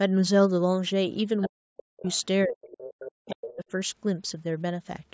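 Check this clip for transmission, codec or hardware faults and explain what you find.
Two echo-cancellation faults appear in this speech, both tied to the far end of a call.

Other side's voice leaking through, at 1.41 to 1.47 s, 1.99 to 2.19 s, 2.53 to 2.85 s and 3.26 to 3.56 s: a second, fainter voice sits about 10 to 25 dB under the main one. Loudspeaker echo likely escaped the canceller. This is an added voice, not a loss.

Speech suppressed in double talk, from 1.48 to 2.08 s and from 2.46 to 3.61 s: the main voice dips by up to about 40 dB. The canceller likely muted both talkers at once. It overlaps most of the leaks, so the main voice drops while the other voice is present. A dropout from packet loss would not track the other talker like this.

The call's microphone processing leaves nothing above 8 kHz.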